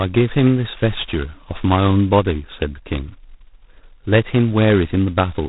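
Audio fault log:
Throughout: G.726 ADPCM at 16 kbit/s, heavy damage. Only two bits a sample code the difference from the adaptive prediction, so quantisation noise is high and tracks the speech level as a harsh, rasping hiss. Nothing passes above 3.9 kHz, leaving the speech band-limited and dull.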